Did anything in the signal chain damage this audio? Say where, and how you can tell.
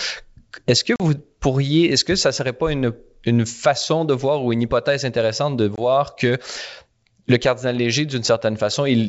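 Yes. Packet loss on an ADPCM call in the network stage: silent gaps at 0.96–1.01 s (about 40 ms) and 5.76–5.81 s (about 20 ms). The G.722 decoder's predictor and step size lose track, so the speech resumes slightly distorted before settling.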